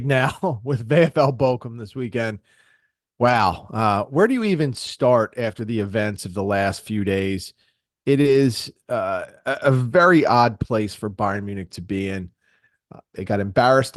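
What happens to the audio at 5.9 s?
A lost packet rebuilt from error correction sits at 5.81 to 5.87 s. About 40 ms of speech went missing, which fits two lost packets, and the decoder filled it from low-bitrate copies carried in the following packets, so there is no gap, just a briefly rougher, noisier patch.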